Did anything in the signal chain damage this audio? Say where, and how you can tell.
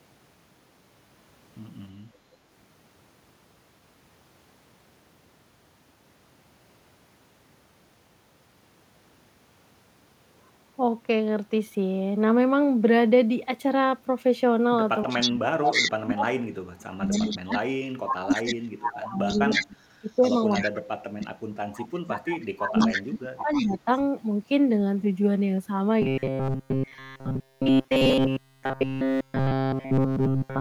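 Yes. Between 15.05 and 23.88 s the speech dips repeatedly, by up to about 35 dB, for roughly seven seconds in total. This is call processing, likely speech suppressed in double talk: with both sides active, the echo canceller attenuated the near talker along with the echo.

A delayed copy of the speech returns 315 ms late over 15.09–15.91 s, 17.09–19.67 s and 20.22–24.0 s. It starts at about the speech's own level, then falls to about 5 dB and about 10 dB below. This is likely an echo leak: the loudspeaker side's canceller let microphone pickup back into the call.

From 26.02 s to the end at 30.60 s the sound becomes a rigid metallic buzz at 133 Hz, with essentially all of it repeated material. This is likely robotic sound from repeated short buffers at the driver or buffer stage: a segment of about 7.5 ms was looped in place of real audio.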